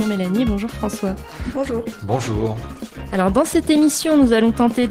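From 1.13 s to the end, the adaptive stream switched to a lower bitrate, consistent with a drop from about 64 to 16 kbit/s Opus. The quality changes abruptly and codec artefacts rise, with no gap.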